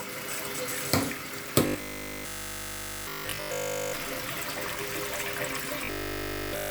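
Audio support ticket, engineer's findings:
Robotic sound from repeated short buffers, 1.67–3.95 s and 5.85–6.71 s. Symptom: sound collapses into a rigid metallic buzz at a fixed 50 Hz, loosely tracking the original contour, over essentially the whole of both spans. Likely cause: playback starved of new data, so the last 20 ms block loops while incoming audio is dropped. Loop period 20 ms gives the 50 Hz buzz. Check jitter buffer and audio callback timing.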